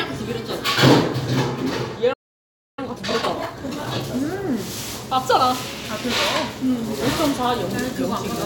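At 2.13 s the player most likely ran short of buffered data, or its playback thread was held up, and this playback stall silences the output until 2.79 s. That leaves a gap of about 0.64 s that interrupts the sound mid-flow. When audio returns, it resumes from the point where it stopped rather than skipping ahead, so nothing is lost, but the break is clearly audible as a dead pause.

From 2.79 s to 4.07 s the player works off the backlog left by the stall with time-compressed catch-up. It trims out short slices of audio and cross-fades the remaining pieces together, so the material plays at 1.5 times normal speed. Because the slices are removed rather than the playback rate being raised, the pitch stays unchanged. The passage sounds hurried.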